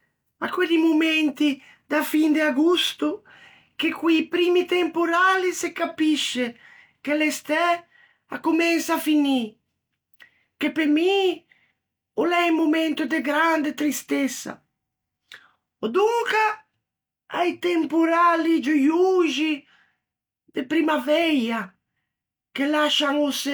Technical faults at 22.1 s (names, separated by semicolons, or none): none